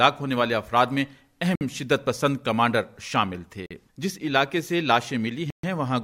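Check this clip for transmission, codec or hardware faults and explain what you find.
Three brief dropouts to silence stand out, at 1.55 to 1.61 s, 3.66 to 3.71 s and 5.50 to 5.64 s. Each lasts 44 to 131 ms, then the sound resumes. This is likely a Bluetooth stall: interference delayed packets, the receiver's buffer emptied, and playback paused until resent data arrived.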